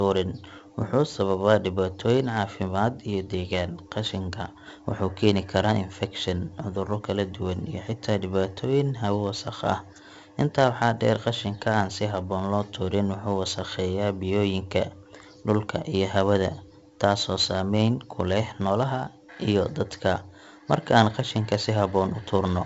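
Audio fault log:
Throughout: 4-bit ADPCM compression. Each sample is coded as a coarse 4-bit step from a prediction, so heavy gritty hiss follows every loud stretch of speech and sharp onsets distort where the step lags. Nothing sounds above 7.7 kHz, pointing to a 16 kHz sample rate and 64 kbps.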